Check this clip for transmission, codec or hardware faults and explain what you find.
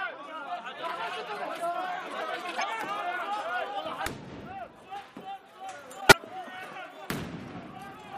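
Two faults, both corrupt frames decoded. At 2.55 to 2.64 s, and again at 6.00 to 6.13 s, damaged compressed frames were decoded and played rather than concealed. Flipped bits scrambled the gains and spectral codes, so the decoder put energy at the wrong frequencies. The first error spans a couple of frames and peaks near -15 dBFS as a short chirp, squeak, blip or burst of noise. The second covers several frames and reaches about -5 dBFS as a louder chirp, squeak, blip or burst of noise.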